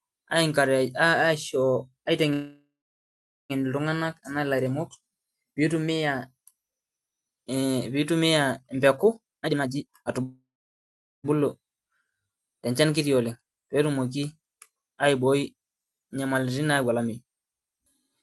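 At 2.33 s the speech stops and a call audio freeze begins, lasting until 3.52 s. The last sound is carried on as a fading buzz, then goes silent for about 0.78 s before the speech resumes exactly where it left off. Nothing is lost, but a gap of about 1.16 s has been inserted and the delay has grown by the same amount. The likely cause is delayed packets draining the jitter buffer.

Right after "pitumia empeku", from 9.24 to 10.22 s, a jitter buffer speed-up compresses the speech to 174% of normal speed with the pitch unchanged, cutting out roughly 0.7 s in many short pitch-period slices. It sounds noticeably hurried.

A second freeze follows immediately, from 10.23 to 11.26 s. It has the same fading fill and about 0.79 s of silence, adding about 1.01 s of delay.

From 14.90 to 17.99 s a milder speed-up runs at 109%, trimming roughly 0.3 s as the receiver works off the extra buffered audio. 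The band-limited top end, extending to about 12 kHz, is consistent with Opus at around 32 kbps.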